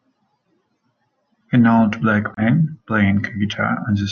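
At 2.34 s the wireless link likely failed to deliver audio packets to the headphones in time, so they were discarded and the output fell silent, a Bluetooth dropout. The hole in the speech runs to 2.42 s, with abrupt edges or a fade of a few milliseconds. When sound returns it has skipped ahead, as though playback had continued unheard, and the short missing span fits a couple of lost packets.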